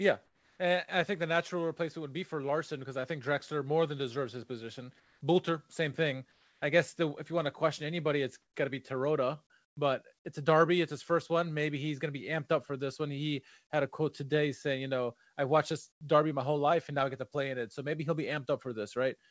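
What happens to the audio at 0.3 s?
From 0.26 to 0.59 s, the real background becomes comfort noise. It sounds steady, featureless and about 4 dB quieter, likely because transmission paused during silence.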